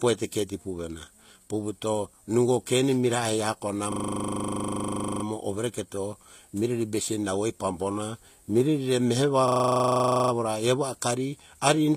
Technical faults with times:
0.00-11.96 HE-AAC compression
3.92-5.24 system hang loop
9.48-10.32 system hang loop

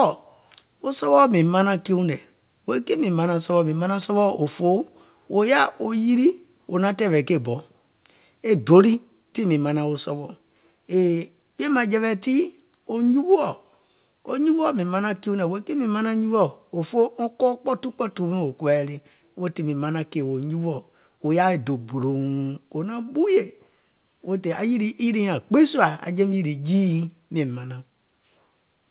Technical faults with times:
4.02-4.05 microphone overload
8.94 microphone volume stepped down

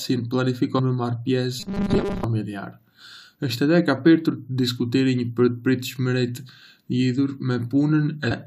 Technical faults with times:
0.78 damaged data in a compressed stream
1.60-2.24 robotic sound from repeated short buffers
8.30 damaged data in a compressed stream

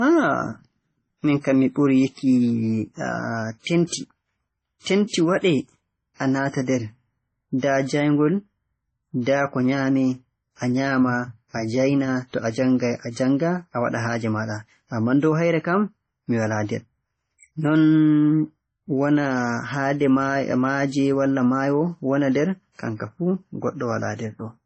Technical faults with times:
0.00-24.65 transcoding between lossy codecs

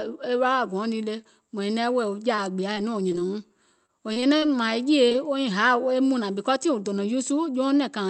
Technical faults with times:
2.35-4.73 repeated packet loss (robotic sound)
5.09-5.17 short concealed packet loss

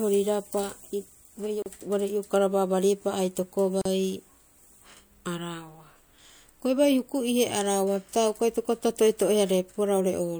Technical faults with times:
1.62-1.66 gap at a join of encoded pieces
3.81-3.85 gap at a join of encoded pieces

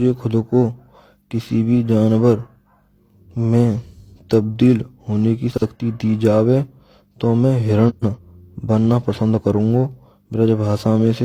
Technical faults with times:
0.00-11.24 periodic clock jitter
5.52-5.62 frames out of order
7.89-8.18 frames out of order

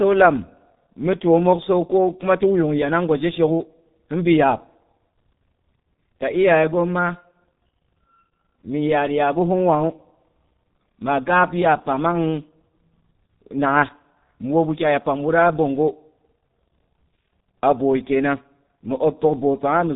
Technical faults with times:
0.00-19.96 G.723.1 codec

